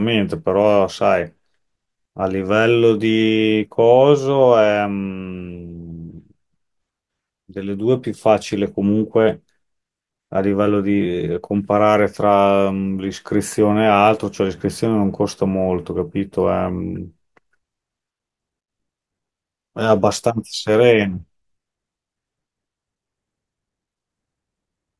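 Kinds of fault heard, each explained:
No technical faults can be heard anywhere in the speech. There is nothing to list under any kind of fault.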